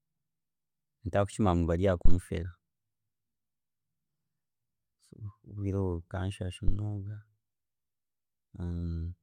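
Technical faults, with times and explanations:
2.05–2.14 s and 6.68–6.79 s, phantom power thump: a supply switched on or off on a live input sends a DC step through the coupling capacitors, giving deep thumps peaking at about −10 dBFS and about −13 dBFS that die away within 20 ms and 24 ms.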